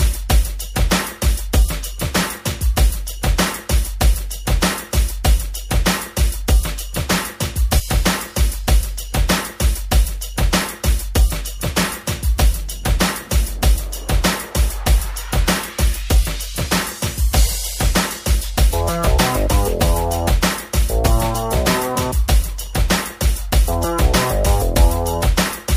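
At 7.78 to 7.80 s, damaged data in the compressed stream knocks the decoder out of sync for 23 ms.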